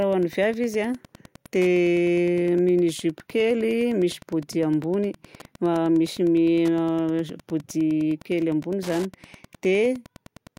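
A speech recording with Wi-Fi interference running right through it, from start to finish. Under the talking there's a steady tick roughly ten times a second, spaced at about 102 ms, which is the beacon interval of a Wi-Fi radio sitting close to the audio circuitry. The circuit rectifies those radio bursts into audible clicks. They sit around 25 dB below the speech.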